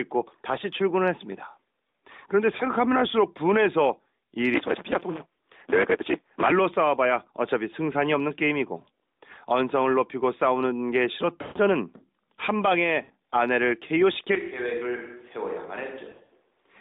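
At 2.58 s a single lost AMR speech frame leaves a brief warble. The decoder repeats the last good settings, so pitch holds rather than cutting to silence.

From 4.54 to 6.52 s a block size mismatch (truncated) drops each block's tail. This gives a 172 Hz buzz and playback 1.88 times faster at about normal pitch, which fits 256-sample reads. A resampling error would shift pitch instead.

Longer runs of lost frames at 11.42 to 11.58 s and 13.04 to 13.12 s stretch the sound and fade it toward silence.

From 14.35 s to the end the sound turns roomy and hollow, about 10 dB quieter with more room noise, likely a switch to a distant microphone. The change is sudden rather than a gradual drift. Within it, frames drop in scattered bursts from 16.10 to 16.32 s.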